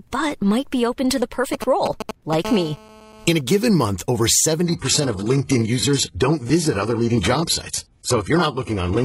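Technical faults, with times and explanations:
1.53–2.35 s, GSM signalling bursts: after "be open to the", a galloping dit-dit-dit of brief 217 Hz buzzes, nearly as loud as the speech. A nearby 2G phone is signalling, and the audio circuit rectifies its radio bursts. The sound is grouped, not continuous.
2.45–3.41 s, GSM phone buzz: a steady, raspy 217 Hz buzz rich in harmonics, about 15 dB below the speech, ending just before "given month over". A phone on a call transmits in regular bursts 217 times a second, unlike the earlier grouped bursts.
4.63–9.05 s, adaptive stream at a lower bitrate: after "given month over", the treble suddenly vanishes above 11.5 kHz. This fits a gapless switch to a low-bitrate HE-AAC version of the stream.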